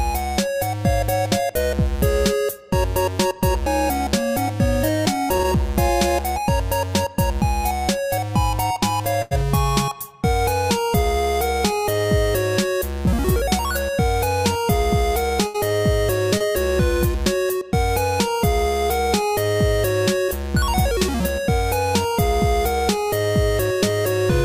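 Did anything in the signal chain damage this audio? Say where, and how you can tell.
Yes. The damage is at the network stage, as lost packets concealed by the receiver. Short concealed packet loss shows at 5.37, 16.38 and 20.26 s. Each time, about 20 ms of audio failed to arrive, and the decoder patched the hole by extending the preceding sound for roughly 15 to 22 ms before blending back into real audio. The result is a brief smear or wobble rather than a clean cut.

Two bursts of packet loss occur, at 9.22 to 9.33 s and at 15.47 to 15.56 s. In each, about 80 ms went missing in a row. The receiver carried the last sound forward for about 88 ms and then 72 ms, fading it as the gap lengthened, so a voiced sound turns into a held buzz and anything else into a decaying hiss. Playback then resumes later, and the audio that fell in the gap is lost.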